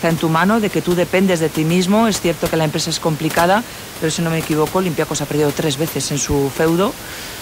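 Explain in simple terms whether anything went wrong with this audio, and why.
Nothing went wrong technically with this speech recording; the background noise of the room sits beneath the speaking and is simply part of where the microphone was, not a problem with the system.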